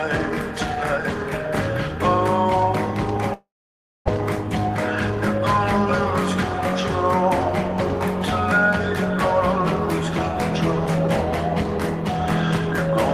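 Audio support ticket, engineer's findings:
Long network dropout, 3.33 to 4.10 s. Sound stops, last sound smeared into a fading buzz, then near-silence for about 590 ms. Likely cause: receiver jitter buffer starved during a stall, concealment filling the gap. Around 600 ms of audio never returns. Playback resumes later, timing shifted by about a tenth of a second.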